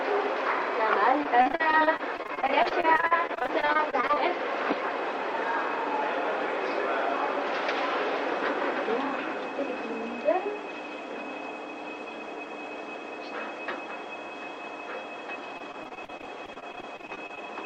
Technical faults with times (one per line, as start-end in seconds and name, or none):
1.23-4.18 repeated packet loss (robotic sound)
15.58-17.48 repeated packet loss (robotic sound)